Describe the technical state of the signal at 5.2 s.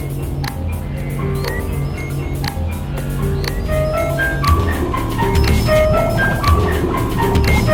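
At 5.2 s the music plays through intact, with no dropout, distortion, glitch or other fault at that point.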